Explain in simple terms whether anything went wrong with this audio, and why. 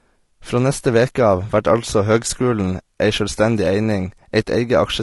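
The speech sounds rough and grainy from start to finish, with a hiss between tones and a thin top end, likely from low-delay AAC compression.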